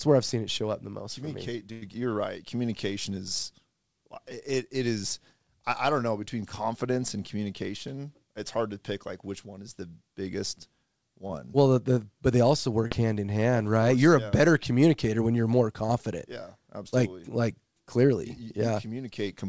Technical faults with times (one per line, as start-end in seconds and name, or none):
1.72-1.83 burst of packet loss
11.27-11.31 short concealed packet loss
12.87-12.93 short concealed packet loss
16.89-16.94 short concealed packet loss